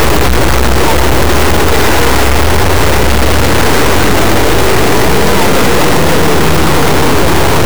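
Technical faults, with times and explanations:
Throughout: integer read as float. The 32-bit integer samples are decoded as 32-bit floats, so their bit patterns become either tiny values near zero or enormous values far past full scale. The output slams between silence and the clipping limit, producing a harsh, very loud square-wave buzz that drops out in the quietest passages.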